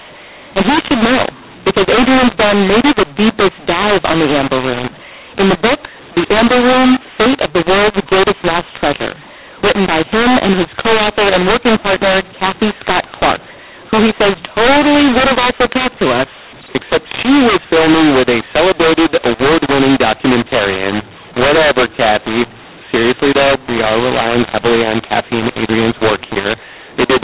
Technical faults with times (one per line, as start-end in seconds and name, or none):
0.00-27.23 mu-law and A-law mixed up